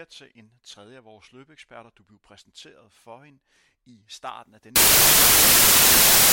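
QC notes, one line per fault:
4.76 to 6.33 s, samples built from the wrong bytes: right after "hende i starten af", the reader misassembles each sample's bytes, so the rapidly changing low-order bits land in the high-order position. The speech turns into loud, harsh broadband noise that runs to the end of the clip.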